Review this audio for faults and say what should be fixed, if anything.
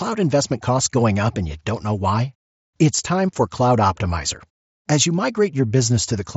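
Nothing needs fixing: the speech comes through a Bluetooth mSBC headset link at a bandwidth that stops near 7.7 kHz, as that wideband codec does, and no fault can be heard anywhere in it.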